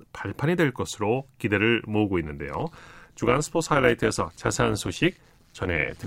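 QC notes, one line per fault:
2.54–6.06 s, overlap-add ripple: the speech pumps by about 11 dB roughly 150 times a second because the frame overlaps don't sum flat, giving a metallic buzz.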